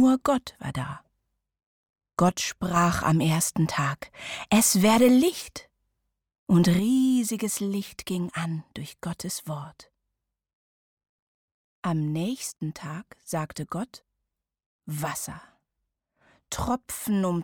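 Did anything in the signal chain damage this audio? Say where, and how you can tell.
Yes. The level falls abruptly by about 6 dB from 2.29 to 2.76 s, recovers, then falls again at 6.79 s and stays down to the end. This is one channel dropping out, likely from a failing analogue connector losing one stereo leg, so the mono sum halves the shared content.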